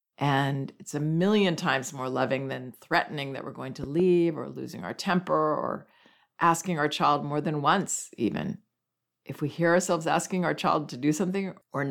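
At about 3.84 s there's a loud pop, actually two sharp thumps in quick succession, finished by 4.02 s and sitting roughly 10 dB above the speech, which carries on underneath. It's likely a voltage spike from a plug, switch or static getting into the chain.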